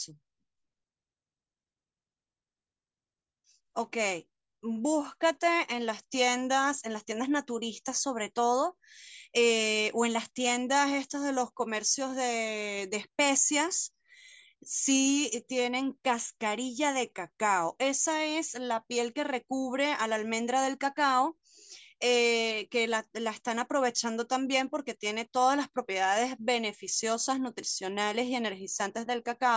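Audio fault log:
No fault in this speech clip.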